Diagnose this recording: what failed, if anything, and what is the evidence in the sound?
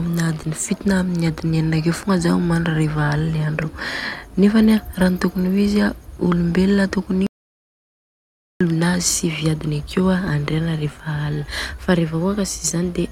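Speech cuts off abruptly at 7.27 s into silence with no room tone until 8.61 s: an audio dropout to silence, likely lost input while the recorder kept writing silence.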